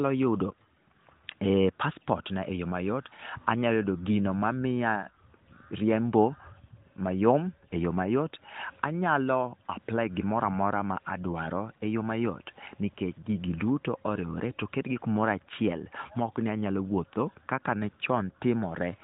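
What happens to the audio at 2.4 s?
Nothing goes wrong at 2.4 s; the speech there is intact, carried through the narrowband AMR mobile codec at 12.2 kbps with no dropout, click or other fault at that moment.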